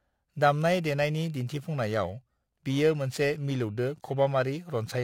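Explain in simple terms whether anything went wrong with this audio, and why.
Periodic clock jitter runs through the whole clip. The converter's timing wobbles around 3 kHz, giving the speech a rough, metallic edge.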